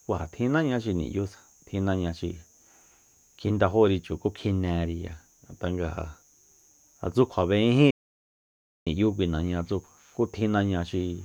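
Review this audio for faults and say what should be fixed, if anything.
Audio dropout to silence from 7.91 to 8.87 s: the input was likely lost while recording continued, erasing about 0.96 s of speech. Unlike a natural pause, the gap carries no room tone. Secure connections and watch for stray mutes while recording.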